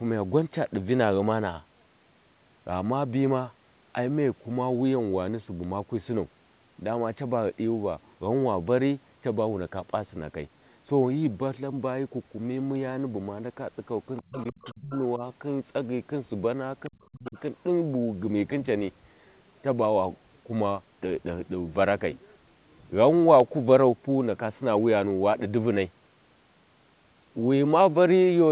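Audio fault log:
14.17–17.40 s, other side's voice leaking through: Faint second voice at 14.17–14.44, 14.61–14.74, 14.93–14.98, 16.84–17.06 and 17.26–17.40 s, about 20 to 30 dB under the talker. Likely loudspeaker echo the canceller missed.
14.21–17.37 s, speech suppressed in double talk: The talker drops out at 14.21–14.93 and 16.89–17.37 s, by about 30 and 35 dB, with a slight dip at 15.17–15.22 s. Likely the canceller ducking both voices during overlap.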